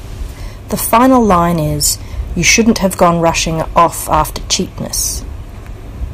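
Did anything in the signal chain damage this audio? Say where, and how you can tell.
Yes: hard clipping at 0.93–1.38 s, 2.46–3.29 s and 3.78–4.54 s. The speech overdrives the converter or sample format by about 6 to 8 dB, so peaks flatten into harsh, buzzy crackle.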